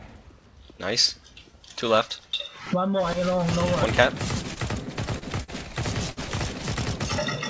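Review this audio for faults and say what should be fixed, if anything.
Repeated stalls (stutter) run from 4.54 to 5.50 s. Packets arrived late or too slowly. The jitter buffer emptied six times in that span. Each time, the receiver held the last sound until more data came. About 120 ms is filled this way, roughly an eighth of the span. The longest gap is 44 ms. Nothing is lost. The audio drags and stutters. To prevent it, stabilise the network path or let the jitter buffer grow sooner.

A short stall from a late packet occurs at 6.10 to 6.19 s. One packet missed its slot, and the jitter buffer ran dry. The receiver stretched the last sound for 70 ms until it arrived. Playback then resumed from the same point. The delay jumped by 70 ms. Nothing is missing. A sound is simply held too long, with a slight buzz or dip. The band stops at 8 kHz, which fits G.722 on the call path. To prevent it, give the jitter buffer more headroom for sudden delay jumps.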